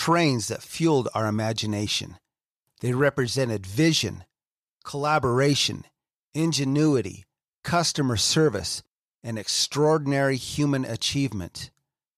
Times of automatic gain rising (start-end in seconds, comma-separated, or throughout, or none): none